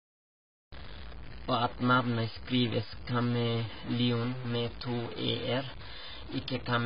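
A cut-off start at 0.72 s: the first 0.72 s are digital silence, and then the speech begins abruptly in the middle of a sound, with no natural attack or fade. The recording or stream began late, so the opening of that sound was never captured.

A distortion runs through the whole clip, and the quiet gaps between phrases are filled with a gritty noise floor rather than silence. This points to a likely stuck bit, where one data bit holds a fixed value and shifts about half the samples by its weight. That bit also flips with the sign of small values, so pauses become noisy.

The clip also has the sound of AAC compression: dull and smeared, with a warbling, fizzy texture, heavy codec damage, and nothing above 5.2 kHz. The likely cause is AAC-LC at a very low bitrate, around 16 kbps, forcing a low cut-off and coarse quantisation.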